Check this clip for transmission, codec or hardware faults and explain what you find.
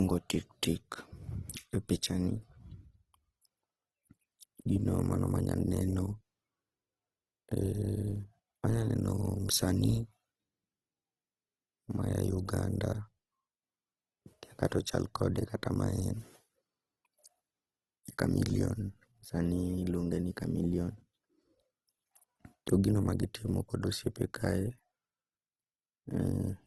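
One fault runs through the whole clip: Opus compression, most likely in CELT mode at a rate that fits about 16 kbps. Short of bits, the encoder fills bands with folded or noise content, so the speech sounds rough and grainy, with nothing above 12.4 kHz.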